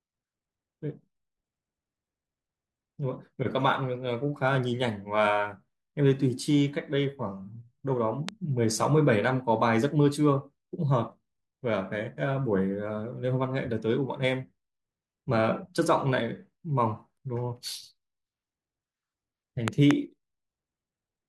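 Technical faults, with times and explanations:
8.29 to 8.31 s, loud pop: a single sharp click about 15 dB above the speech, which carries on underneath, likely from a sudden voltage step such as static or a switch.
19.68 to 19.93 s, loud pop: two thumps in quick succession, peaking about 20 dB above the speech, likely a plug or driver glitch whose pulse the following circuits shaped.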